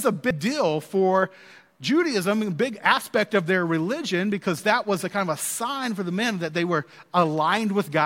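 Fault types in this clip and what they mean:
Compressed frames skipped: at 0.30 s, just before "deal for", the speech lurches forward as a short run of coded frames never reaches the output, roughly 150 ms of audio dropped in a handful of frames, which fits a frame length of 32 ms. The missing stretch of speech sets it apart from a plain dropout or a hard sample-level splice.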